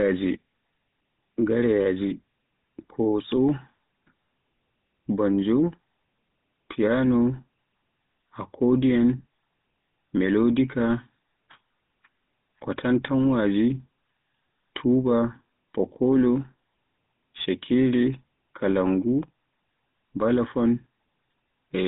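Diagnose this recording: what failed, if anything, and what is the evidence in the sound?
GSM full-rate codec damage runs through the whole speech clip, at the codec stage. The speech sits in a narrow telephone band of 150 Hz to 3.7 kHz and carries a plainly audible buzzy, gravelly roughness, which fits the 13 kbps GSM full-rate coder. That codec models the speech as a vocal-tract filter driven by a sparse train of regularly spaced pulses. The coarse excitation replaces the natural voice source and leaves that grainy buzz.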